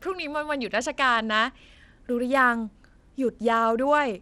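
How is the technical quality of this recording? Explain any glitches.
The quality is poor: plainly audible codec damage runs through the whole speech clip. Bluetooth SBC compression is the likely cause, with a starved bit pool, fitting about 96 kbps, leaving treble flickering and gritty; a spectrogram shows patchy, blocky upper bands.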